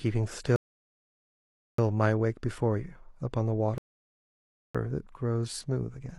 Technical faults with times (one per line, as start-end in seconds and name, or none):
0.56-1.78 rebuffering stall
3.78-4.75 rebuffering stall